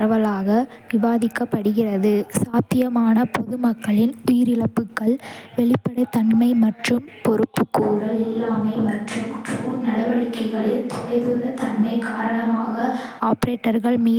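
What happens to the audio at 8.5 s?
At 8.5 s the speech is in the middle of a switch to a distant microphone, running from 7.84 to 13.19 s. The close mic's feed likely dropped out, so the speech turns abruptly hollow and roomy, thinner in the bass, about 5 dB quieter and with faint room noise. Unlike a simple gain drop, the room tone changes too.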